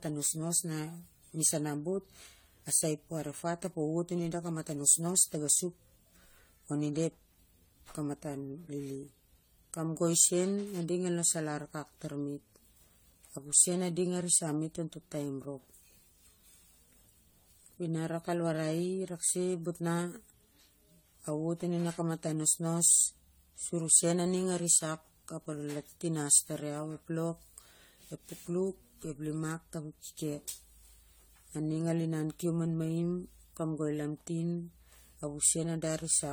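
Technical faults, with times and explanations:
Throughout, generation loss: the speech sounds swirly and hollow, with smeared consonant attacks and a grainy, watery texture that is heavier than a single encode at this quality would give, even though content extends up to 20 kHz. This is likely the result of repeated lossy re-encoding, around seven passes, which fits an AAC-LC chain near 64 kbit/s. Each pass requantises on a shifted frame grid, so noise and spectral holes accumulate.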